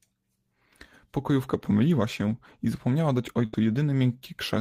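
A speech clip with a burst of packet loss from 3.45 to 3.55 s: about 80 ms of audio never arrived, so the receiver stretched the last sound, fading it over about 75 ms, then skipped ahead.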